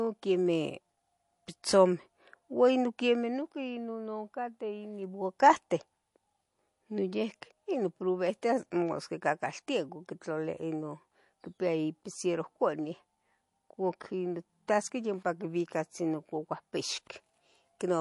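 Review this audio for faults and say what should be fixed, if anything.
Plainly audible MP3 compression runs throughout the speech, giving a watery, swirly texture and smeared s sounds. Nothing sits above 11.3 kHz, which fits a likely low-bitrate encode around 48 kbps. A spectrogram shows a hard flat ceiling at 11.3 kHz with flickering holes in the upper bands as weak lines drop in and out between frames. Encode from the original source at a higher bitrate, or keep it lossless.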